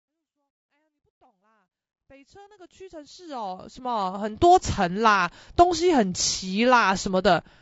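Speech, roughened throughout by what is likely low-delay AAC compression. The voice sounds grainy, with noise filling the gaps between harmonics and a thin, synthetic top band. Short codec frames resolve pitch poorly. The damage fits a bitrate near 32 kbps. A smooth fade-in runs from the start to 4.57 s.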